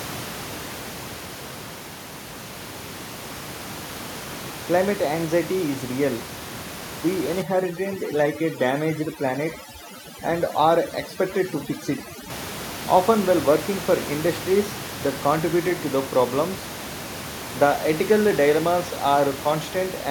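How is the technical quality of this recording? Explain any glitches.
The speech has one clear glitch, set against room noise sitting about 11 dB below the voice. From 7.42 to 12.30 s there is overdone noise removal: an aggressive reducer mutes any frequency band near its noise estimate, so the background drops and breaks up into twinkling specks. A spectrogram shows holes and isolated bright dots, and the waveform's floor drops abruptly.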